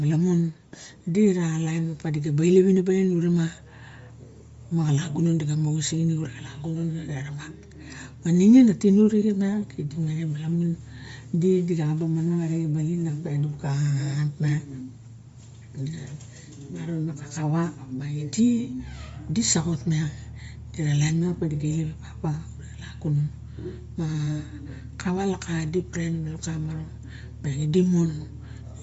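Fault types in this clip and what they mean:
Bluetooth LC3 compression: audible coding damage, speech band ending near 7.7 kHz with a grainy, breathy top, likely LE Audio's transform codec in 10 ms frames.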